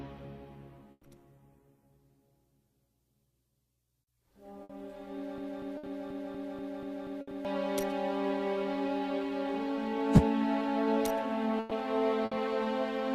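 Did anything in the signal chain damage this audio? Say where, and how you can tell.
Yes. Network stage: bursts of packet loss at 0.91, 4.63, 5.77, 7.21, 11.59 and 12.25 s. Each gap of 60 or 120 ms is filled by a fading held sound, then audio skips ahead.

Playback or streaming stage: a broken-record loop runs from 5.38 to 7.45 s. A 241 ms fragment repeats nine times back to back, likely from a stalled player or stream.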